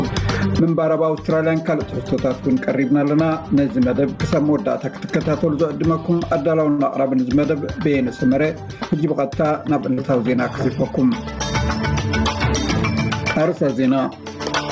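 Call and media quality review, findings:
Gain pumping, whole clip. Gain swings by about 20 dB, ducking under each loud sound. Loud and soft passages squashed toward one level. Likely cause: input gain set far too high, with a fast limiter clamping each peak.

Short stall from a late packet, 6.70 to 6.80 s. Sound held about 82 ms, slight buzz or dip, then resumes where it stopped. Jitter buffer ran dry waiting for a late packet. Receiver stretched the last audio. Nothing lost, only delayed.

Short concealed packet loss, 9.93 to 10.07 s. Brief smear or wobble. About 40 ms of audio missing, replaced by roughly 43 ms of extrapolated fill, then crossfaded back. Decoder continued the last sound's pitch or noise shape. Band-limited to 8 kHz throughout, consistent with G.722.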